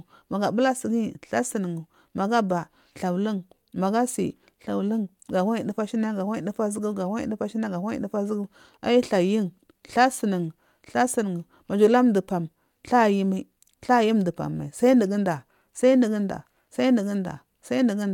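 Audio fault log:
No faults found in the speech recording.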